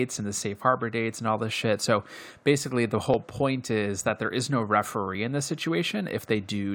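At 3.14 to 3.17 s, between "basically the" and "point is that there", the speech has an overlap between stream segments: timestamps of adjacent 2.0 s segments collide, so about 30 ms of genuine audio is discarded and the waveform jumps, heard as a brief skip.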